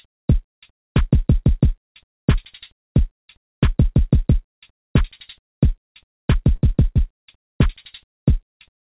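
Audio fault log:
6.56–7.32 s, repeated packet loss (robotic sound): packets kept going missing, and each of six short gaps, the longest 37 ms, was patched by extending the preceding sound, leaving choppy audio with pieces missing.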